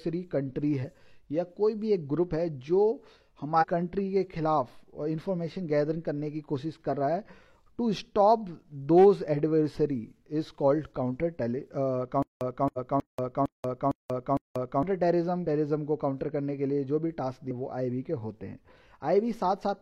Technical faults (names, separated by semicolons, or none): compressed frames skipped; stutter with silent gaps